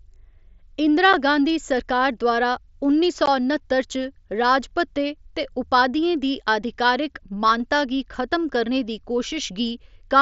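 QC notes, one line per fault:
1.13 s, unconcealed Bluetooth headset packet loss: one voice packet between the headset and the phone never arrived, and nothing was patched in to cover it. About 7.5 ms of silence or an idle pattern drops in with hard edges just before "गांधी सरकार द्वारा उन्नी", so the speech is briefly cut and a click can sound at the break.
3.26 s, unconcealed Bluetooth headset packet loss: a longer run, about 15 ms, which fits two consecutive packets lost on the wideband mSBC link. It comes right after "गांधी सरकार द्वारा उन्नी" as an abrupt hole in the speech.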